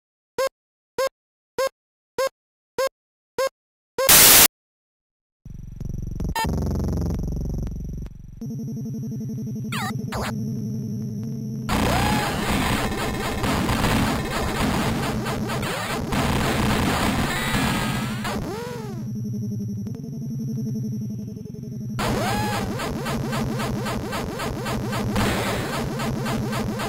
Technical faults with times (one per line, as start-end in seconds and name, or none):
4.09-4.46 file tags played as audio